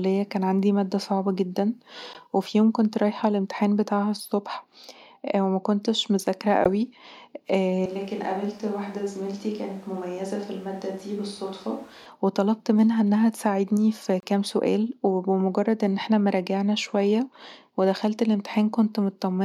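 At 2.13 to 2.17 s the speech cuts to silence, then resumes. This is a Bluetooth dropout, likely from a late packet, about 14 ms lost. The same gap recurs at 6.64 to 6.68 s, right after "ومكنتش مذاكره".

From 7.86 to 12.06 s the speech turns suddenly hollow, roomy and thin, about 5 dB quieter, with more background noise. This is a switch to a distant microphone, likely because the close microphone's signal was lost. It ends just before "وطلبت منها انها تساعدني".

At 14.20 to 14.24 s, between "منها انها تساعدني في" and "سؤال وبمجرد ان احنا", a longer dropout removes about 28 ms. That fits two lost packets in a row.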